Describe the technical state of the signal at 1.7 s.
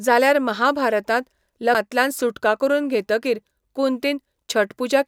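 Damaged data in a compressed stream appears at 1.75 s, between "जाल्यार महाभारतांत" and "सुटका करून घेतकीर". A short stretch of the encoded speech carries corrupted bytes, so the decoder cannot read those frames as valid. It loses frame alignment and scans ahead for the next intact header before audio resumes. That brief misreading comes through as a momentary chirp or blip cutting across the speech at that point.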